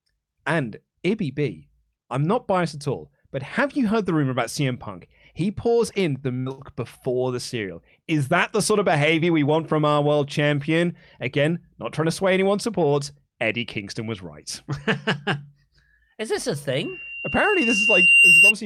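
A short stall from a late packet comes first, at 6.19 to 6.33 s. A packet missed its playout time, the jitter buffer ran dry, and the receiver held the last bit of speech for about 22 ms until the packet arrived, then carried on from the same point. Nothing is lost, but the sound hangs briefly with a faint buzzy smear, and playback runs 22 ms later from then on.

A burst of packet loss follows at 6.40 to 6.49 s, just before "before the cereal". Here the packets never arrived in time, so the receiver extended the last sound for about 55 ms while fading it down, giving a short held sound that dies away. When the audio picks up again, about 60 ms of speech has been skipped.

A second short stall from a late packet comes straight after, at 6.52 to 6.61 s, also just before "before the cereal". This time the buffer ran empty for about 60 ms, so a sound is stretched longer before speech resumes intact, adding another 60 ms of delay.

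A loudspeaker feedback squeal begins at 16.81 s, right after "is this a", and lasts until 18.53 s. The microphone is picking up the loudspeaker it feeds, and at 2.8 kHz the loop gain is above one, so that tone reinforces itself on every pass. It swells over roughly one and a half seconds into a piercing single-pitch whistle that ends up around 10 dB louder than the speech.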